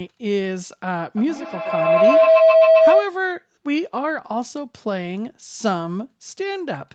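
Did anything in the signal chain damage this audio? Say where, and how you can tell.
Yes. A feedback howl runs from 1.17 to 3.16 s, peaking about 10 dB above the speech. It comes from an acoustic loop between two devices on the same call: each trip from microphone to loudspeaker and back arrives louder, so the repeats build and settle on a tone near 700 Hz, pulsing roughly every tenth of a second. On a spectrogram it shows as a thickening horizontal line near 700 Hz with regular beats, and the waveform swells steadily until it breaks off.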